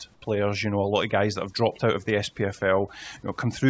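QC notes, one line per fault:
Throughout: overdone noise removal. The room noise, about 39 dB below the speech, has been pushed down, with small twinkling specks left in the gaps. The reducer is set far too hard. It shuts individual frequency bands whenever their level comes close to its noise estimate, so the quieter parts of the speech are removed along with the noise. This runs over a wideband call path that carries nothing above 8 kHz.
0.14 to 0.22 s: comfort noise in place of the background. For about 80 ms the natural background, sitting about 37 dB below the loud passages, gives way to a steady, featureless hiss about 5 dB quieter, and then the real background returns. The likely cause is discontinuous transmission: the sender briefly stopped sending during a pause, and the receiver filled the gap with synthetic noise shaped only roughly like the room, which points to standard RFC 3389 comfort noise generation.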